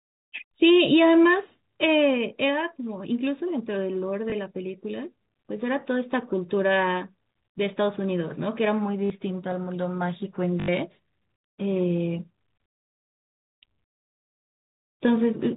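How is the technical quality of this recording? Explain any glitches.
The recording is speech carried over a G.711 telephone path, so it is band-limited at 4 kHz with only faint companding noise. Its glitches are three short dropouts from packet loss with the last packet repeated. These occur at 4.30 s (20 ms), 9.06 to 9.10 s (40 ms) and 10.60 to 10.68 s (80 ms), which fits one, two and four lost 20 ms packets. At each gap the receiver replays the last audio chunk until fresh data arrives. The repeats seldom align with the pitch period. The longer runs buzz at about 50 Hz, heard as a brief robotic stutter.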